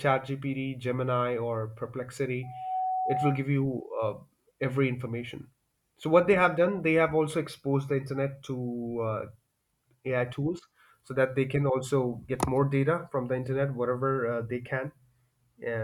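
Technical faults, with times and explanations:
2.43 to 3.46 s, loudspeaker feedback squeal: a steady 747 Hz tone swells over roughly a third of a second to about the level of the speech, then holds. The microphone is re-amplifying its own loudspeaker, and at that frequency the loop gain exceeds one.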